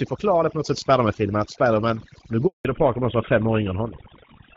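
A speech recording, carried over a phone call, with overdone noise removal applied throughout: a noise reduction stage set far too strong pulls individual frequency bands down whenever they sit near its noise estimate, so the background collapses to near silence dotted with twinkling specks while the voice has its quieter components stripped along with the hiss. At 2.47 s the call hands over between networks, and because no speech frames arrive during the switch there is a handover gap: the voice dies away almost at once and stays silent for 180 ms until 2.65 s, losing whatever fell in that stretch. From 2.65 s to the end the call falls back to narrowband, moving from a wideband codec whose light coding fits AMR-WB at around 12.65 kbit/s to what sounds like GSM full rate. Nothing above 4 kHz survives, leaving the voice duller and rougher.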